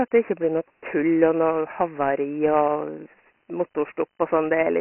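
Speech that sounds thin, dull and gritty from start to finish, with a rough hiss clinging to every syllable and no content above 3 kHz, the signature of Dialogic VOX ADPCM. The codec stores each sample as a 4-bit step relative to a prediction, and here the damage is heavy. The 3 kHz ceiling points to 6,000 samples a second, which fits a 24 kbps stream, while the low end starts near 250 Hz as on a phone line.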